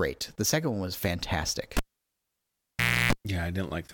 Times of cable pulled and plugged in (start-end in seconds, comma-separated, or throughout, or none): 1.77-3.13